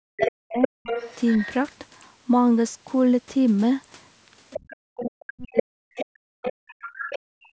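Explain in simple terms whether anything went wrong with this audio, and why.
Yes, a few things went wrong, and they all trace back to the call's echo canceller.

Speech suppressed in double talk: from the start to 0.82 s, and again from 4.72 to 6.81 s, the speaker's voice sinks way down or breaks up. Most likely the echo canceller couldn't tell the speaker apart from the other person's voice coming out of the loudspeaker, so it turned everything down.

The other side's voice leaking through: a second voice is audible from 0.2 to 1.47 s, fairly loud and close to the speaker's level, and again from 4.5 to 7.48 s, quieter. That's likely loudspeaker sound the echo canceller failed to fully clean out of the mic.

Background gated by the echo canceller: from 7.19 s to the end, roughly the last third of a second, the room sound drops right out. The canceller clamped the mic hard while the loudspeaker was playing, and the clip ends before it lets go.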